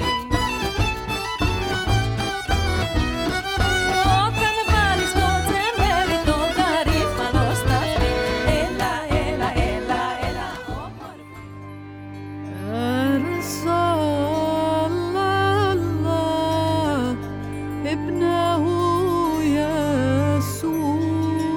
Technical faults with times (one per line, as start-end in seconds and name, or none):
none